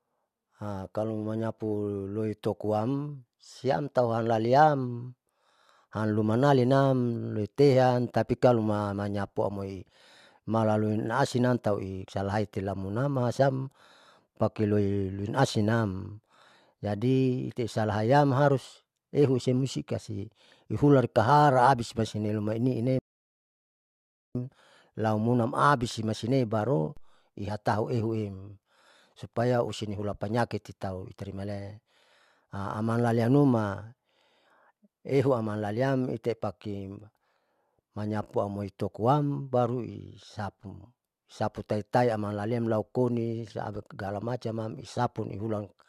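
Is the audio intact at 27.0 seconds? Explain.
No, a DC step hits at 26.97 s, between "aumunam abise maisine baru" and "ihatau ehuem supaya". The waveform's zero line jumps and then decays back through a roughly 2 Hz high-pass, giving a low thump. It shows as a baseline shift and a brief broadband line at the bottom of the spectrogram.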